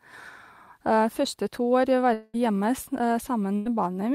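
From 2.13 s to 2.36 s, the speech stops and the receiver keeps sounding the last fragment for about 200 ms, a held buzz or hiss that fades without ever dropping to silence. When the speech resumes, roughly 200 ms of it is gone. This is likely a long network dropout: no audio arrived for that stretch, so concealment filled the whole gap rather than the missing material being recovered.

At 3.56 s to 3.67 s, a burst of packet loss leaves a gap of about 100 ms. Concealment extends the preceding sound for roughly the same time and turns it down as the gap goes on, producing a short buzz or hiss that fades. The speech then picks up further along, with that tenth of a second absent, consistent with a few consecutive packets lost or arriving too late to be played.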